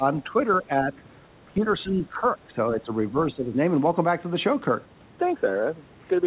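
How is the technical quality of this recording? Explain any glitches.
The speech is audibly pulled down in level five times early in the recording: 0.24–0.42 s, 0.63–1.02 s, 1.45–1.67 s, 1.83–2.91 s and 3.34–3.58 s. The dips range from about 5 to about 15 dB, deepest near 1.5 s, and the stretch from 1.83 s is the longest. This is likely speech suppressed in double talk. With both sides speaking at once, the echo canceller could not tell this talker from loudspeaker echo and turned the voice down. Throughout, the sound stops at 4 kHz, which fits the narrowband G.711 call codec.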